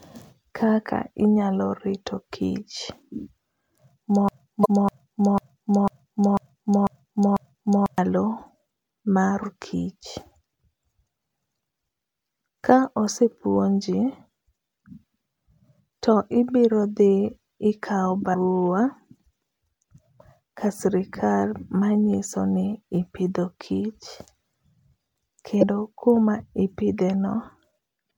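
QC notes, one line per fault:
4.29 to 7.98 s, broken-record loop. A fragment about 0.5 s long (496 ms) repeats exactly, back to back, eight times. The likely cause is a player, encoder or stream that stalled and kept resending the last piece it held. Each repeat is identical, so the sound stutters in a fixed rhythm. The audio that belonged in those 3.7 seconds never plays. Normal sound resumes at 7.98 s.
4.61 to 4.66 s, 9.42 s, 18.30 to 18.35 s, 25.59 to 25.63 s, 28.07 to 28.10 s, damaged data in a compressed stream. Each is a brief chirp or blip, 50 ms or shorter. Bytes in the compressed stream were lost or corrupted there. The decoder misreads the bad frames, loses sync and hunts for the next frame header. That produces the glitch. The first one falls inside the looped stretch.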